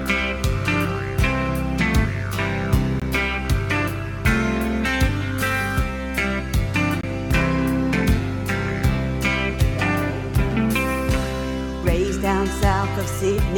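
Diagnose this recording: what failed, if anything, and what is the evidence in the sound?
Playback stage: a gap between stream segments. Hard-edged silences land at 3.00 s and from 7.01 to 7.03 s, 19 and 24 ms long, four seconds apart, matching 4-second segments. The segment timestamps don't quite meet, so the player pads with silence. No audio is lost.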